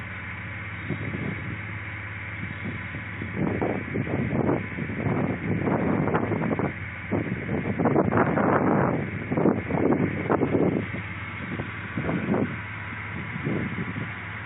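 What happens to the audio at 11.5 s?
Nothing goes wrong at 11.5 s; the audio there plays through intact, with no dropout, click, distortion or other fault.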